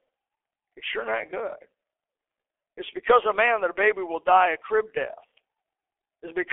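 G.723.1 codec damage runs through the whole of this speech clip, from start to finish. The sound is held to a telephone band of roughly 300 Hz to 3.4 kHz, with nothing above 3.7 kHz, so it comes across muffled and thin. The heavy hoarseness and smeared consonants fit a very low bitrate of around 6 kbit/s: the codec's coarse, slowly updated voice model, working in 30 ms frames, cannot follow rapid changes.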